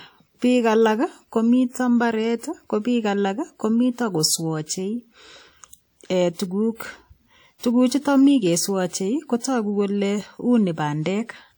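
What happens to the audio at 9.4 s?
At 9.4 s the speech carries the same low-bitrate audio saved at a high bitrate as the rest of the clip. The earlier coarse encoding's artefacts remain, and the high-rate re-encode, likely an MP3 at 320 kbit/s, can't undo them. Nothing is present above 20.2 kHz.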